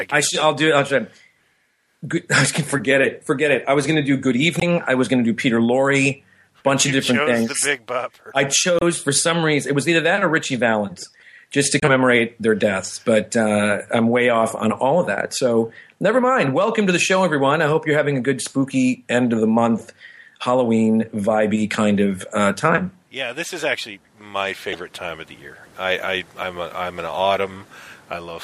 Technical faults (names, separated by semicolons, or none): damaged data in a compressed stream